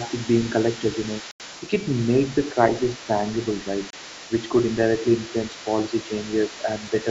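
From the start the speech dips briefly, by about 5 dB, over 0.0 to 0.14 s, then again at 0.78 to 0.84 s, 2.49 to 2.57 s (deeper, around 10 dB) and 6.63 to 6.68 s. This is likely speech suppressed in double talk: an echo canceller, unable to separate the talker from loudspeaker echo, turned everything down.

From 0.06 to 2.61 s and again from 2.89 s to the end, a second voice sits faintly underneath, roughly 20 dB below the main speech. This is likely the other side's voice leaking through, loudspeaker playback the echo canceller failed to remove.

At 1.31 to 1.40 s the audio drops to complete silence for 87 ms, and at 3.90 to 3.93 s for 28 ms, then resumes. These are likely Bluetooth stalls, with the headphone buffer running dry while packets were resent. The hard gap to silence distinguishes them from the softer double-talk dips, while the band-limited sound, with nothing above 8 kHz, matches ordinary call microphone processing.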